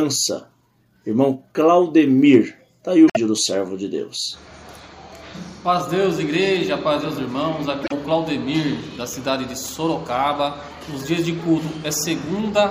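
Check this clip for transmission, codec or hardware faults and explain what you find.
Two faults, both the same kind. At 3.07 to 3.17 s and 7.83 to 7.92 s, a likely broken MP3 bit reservoir: frames went missing, so the following ones drew on the wrong bytes, garbling about 0.1 s, roughly four 26.1 ms frames, as the audio skips ahead.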